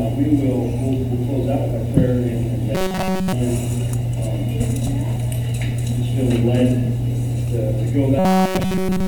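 A rigid, metallic buzz at about 188 Hz replaces the audio from 2.75 to 3.33 s and again from 8.19 s to the end: robotic sound from repeated short buffers, likely from one roughly 5.3 ms block looping.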